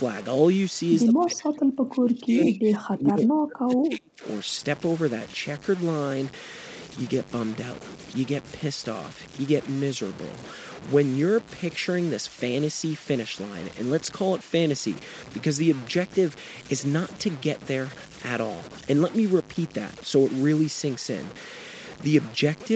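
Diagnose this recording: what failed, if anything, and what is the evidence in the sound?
Sample-format conversion failed. Grainy distortion follows the speech throughout, only about 15 dB below it. The likely cause is low bit depth without dither, truncated to 6 bits.

Call processing failed from 1.05 to 4.24 s. The speech dips by up to about 30 dB. This is likely speech suppressed in double talk by the echo canceller.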